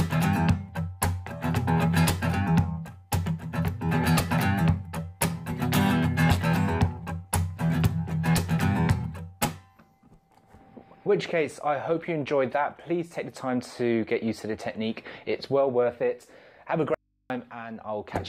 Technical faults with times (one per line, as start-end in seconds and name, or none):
16.94-17.30 audio dropout to a faint residue